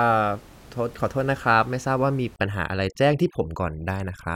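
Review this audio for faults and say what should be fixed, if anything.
Overdone noise removal runs from 2.36 s to the end of the clip. Before that point the room noise sits about 26 dB below the speech. From 2.36 s the reduction clamps individual frequency bands down hard whenever they come close to its noise estimate. The background drops and breaks up into sparkling specks. The quieter parts of the speech get pulled out along with the noise. To prevent this, set the noise reduction to a gentler depth so that it lowers the room noise without gating bands that carry speech.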